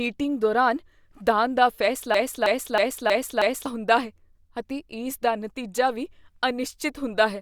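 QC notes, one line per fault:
2.14–3.66 s, broken-record loop: after "ਦੌਰਾਨ ਦਾਨ ਦਾ", a 318 ms speech fragment repeats exactly, back to back, five times before "ਹੁੰਦਾ ਹੈ ਅਤੇ". The playback chain likely stalled and kept resending its last held fragment, so the speech due there is lost.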